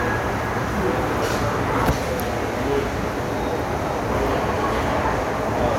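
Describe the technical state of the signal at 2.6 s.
At 2.6 s the audio is intact, with no dropout, distortion or other fault at that moment.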